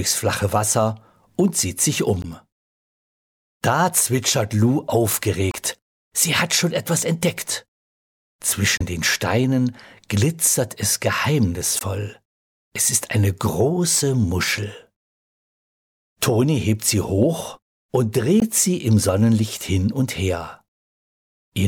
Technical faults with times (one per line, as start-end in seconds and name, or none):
2.22-2.25 damaged data in a compressed stream
5.50-5.55 damaged data in a compressed stream
8.77-8.82 damaged data in a compressed stream
11.79-11.82 damaged data in a compressed stream
18.40 damaged data in a compressed stream